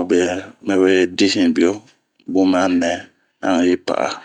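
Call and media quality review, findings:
No faults found in this speech recording.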